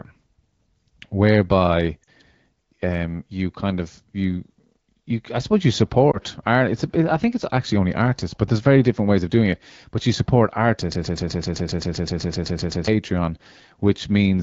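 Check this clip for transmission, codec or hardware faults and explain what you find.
Two kinds of fault turn up in this speech clip: short dropouts from lost AMR speech frames, and a broken-record loop near the end. The AMR wideband (HD Voice) coding underneath carries only light codec colouring, which fits a rate around 12.65 kbit/s.

Lost AMR speech frames occur at 2.03–2.09 s and at 6.11–6.18 s, the second right after "you I suppose you". When a frame arrives corrupted, the decoder conceals the gap by reusing its last good pitch and vocal tract settings at reduced gain. The first gap spans about 40 ms, consistent with two consecutive frames, and the second about 20 ms, a single frame. In the first the sound drops to near silence, and the second is heard as a brief dip or warble in the speech.

A broken-record loop runs from 10.92 to 12.88 s, starting just after "you support". A 128 ms fragment repeats exactly, back to back, 15 times, so the audio that belonged in those two seconds is lost. 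The likely cause is a stalled player, encoder or stream that kept sending the last fragment it held. The result is a rapid, stuttering repetition of that one slice.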